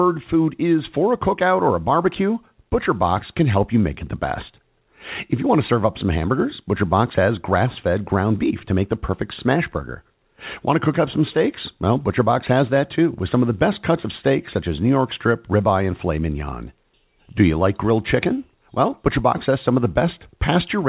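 No technical faults are audible.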